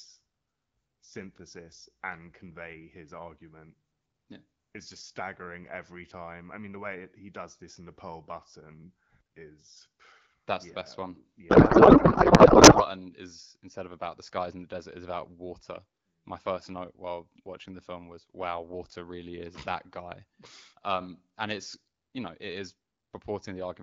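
A speech clip carried over the AMR wideband (HD Voice) codec, with light coding damage consistent with a 12.65 kbit/s mode. From 11.49 to 12.85 s, between "yeah the best one" and "is instead of about", a codec payload misread turns the speech into garbled noise and warble. The sound points to octet-aligned AMR frames being parsed as bandwidth-efficient, so fields land in the wrong positions until packing agrees again.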